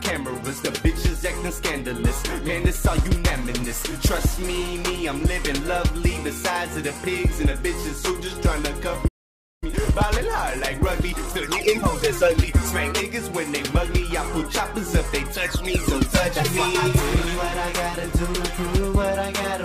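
At 9.07 s the audio cuts out in mid-flow and stays silent until 9.64 s, a gap of about 0.54 s. This is a playback stall: the player most likely ran dry of buffered data or had its output thread blocked, so nothing reached the output until it recovered. On a waveform the trace drops abruptly to a flat line. A spectrogram shows a clean vertical band of empty space across all frequencies, with sharp edges on both sides.

When the sound resumes at 9.64 s it runs hurried until 12.64 s. This is time-compressed catch-up, with the player working off its backlog at about 1.15 times normal speed. It does this by cutting out tiny slices and cross-fading the joins, so pitch stays where it was but the pacing feels rushed. On a spectrogram the harmonic lines keep their height while events sit closer together in time. A waveform shows slightly compacted envelopes, with small irregularities at the splice points.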